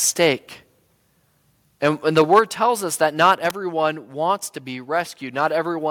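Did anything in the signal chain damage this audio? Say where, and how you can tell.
Yes. The converter stage shows microphone overload at 0.22–0.26 s, 1.85–1.88 s, 2.17–2.39 s (just before "tells us that") and 3.22–3.32 s (just after "tells us that"). Peaks run about 1–5 dB past full scale, flattening their tops into a harsh crackle on the loudest syllables. The likely cause is input gain set too high.

Call processing shows the microphone volume stepped down at 2.22 s, 2.39 s and 3.39 s. Each time, voice and background drop together by about 3 dB in one step, right after or during the distorted peaks. This is likely the software cutting the device's input volume in reaction to the clipping.

In the analogue wiring there is an electrical switching spike at 3.50 s, just before "wants to be". It is a sharp snap of roughly 6 ms sitting on top of the speech. Its likely source is a nearby switch or static discharge coupling into the audio line.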